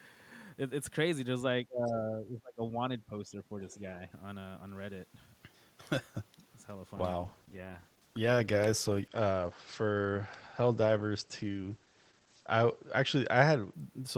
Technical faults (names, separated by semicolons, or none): speech suppressed in double talk; other side's voice leaking through; call bitrate drop